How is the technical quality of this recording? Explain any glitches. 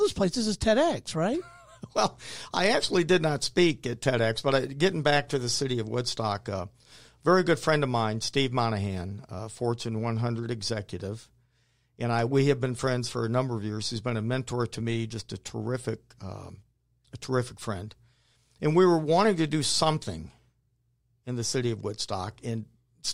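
No glitches or technical faults are audible anywhere here.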